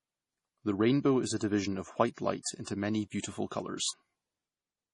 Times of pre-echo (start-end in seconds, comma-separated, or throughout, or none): 2.42-2.46, 3.21-3.24